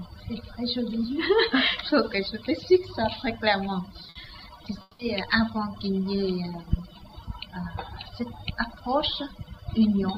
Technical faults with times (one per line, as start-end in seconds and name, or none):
4.09-4.18 burst of packet loss
4.81-5.02 long network dropout